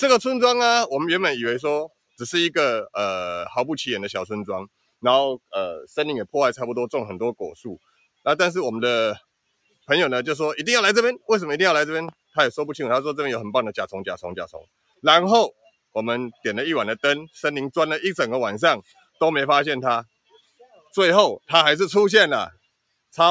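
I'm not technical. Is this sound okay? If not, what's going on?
No. A noise suppressor applied to music or sounds runs throughout: a filter meant for speech keeps mistaking steady parts of the sound for noise, so the level pumps.

The sound cut by the noise suppressor shows up as deep dips at 1.88–2.2 s, 4.67–5.96 s, 7.54–8.26 s, 9.19–9.89 s, 14.47–16.45 s, 18.82–19.21 s, 20.06–21.49 s and 22.52–23.17 s. Held or fading sounds sink or cut off early there.

A loud pop, actually two sharp clicks in quick succession, lands at 12.09–12.15 s on top of the sound, likely from a brief electrical jolt such as a plug, switch or static.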